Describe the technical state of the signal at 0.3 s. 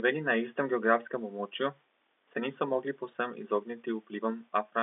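At 0.3 s the signal is intact, carrying the ordinary band-limited sound of G.711 telephone coding with nothing missing, distorted or interrupted.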